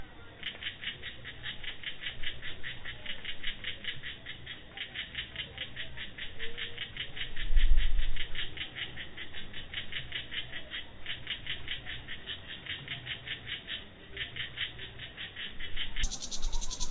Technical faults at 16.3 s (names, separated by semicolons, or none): wrong sample rate